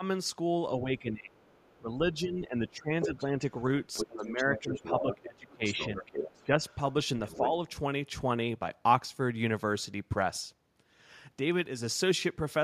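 At 0.00 to 0.04 s the speech dips by about 10 dB, a brief notch in the waveform envelope. From 0.83 to 3.43 s comes the main stretch of speech suppressed in double talk: about 1.5 s in total is pulled down in pieces, by as much as about 20 dB. The likely cause is an echo canceller that could not separate the near talker from loudspeaker echo and turned both down. On a waveform this shows as a chewed, gated envelope. On a spectrogram the harmonics and upper frequency bands thin out or drop to blank patches.

Inside that stretch the other side's voice leaks through. From 1.42 to 1.79 s the leak is very faint, some 35 dB below the speech. From 3.01 to 3.25 s it is roughly as loud as the talker. On a spectrogram the leak appears as a second, unrelated harmonic pattern laid over the first.

A longer leak runs from 3.93 to 7.49 s at only a few dB below the speech. It sounds like a second voice behind the talker. 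Within it, from 4.07 to 6.60 s, the talker is suppressed again by up to about 15 dB. On a spectrogram the talker's energy weakens while the foreign pattern continues. A last small dip of about 5 dB falls at 7.37 to 7.41 s.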